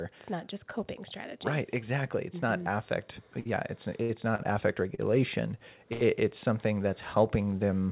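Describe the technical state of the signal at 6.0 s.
At 6.0 s you're inside a short stall from a late packet, running from about 5.93 to 6.03 s. A packet didn't show up in time, the jitter buffer ran dry, and the receiver held the last bit of speech for about 78 ms until it arrived. Nothing's lost, but that sound drags with a slight buzz or dip.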